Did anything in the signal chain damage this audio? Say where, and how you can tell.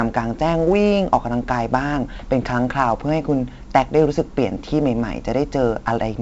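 Yes, at the codec stage, and it runs the whole way through. This is 4-bit ADPCM compression. There's a gritty hiss riding on every loud stretch of the speech, rising and falling with the level, and hard onsets get roughened because the adaptive step can't grow fast enough to keep up. Nothing comes through above 7.8 kHz, which points to a 16 kHz sample rate, so roughly 64 kbps at 4 bits a sample. The damage is heavy.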